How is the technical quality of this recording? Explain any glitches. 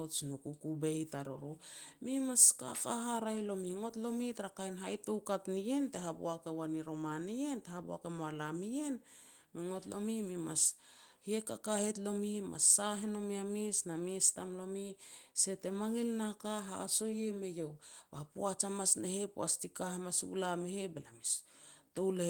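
The speech comes through Opus voice compression in its hybrid fullband mode with no glitches and only light coding traces, and its band still extends to about 20 kHz.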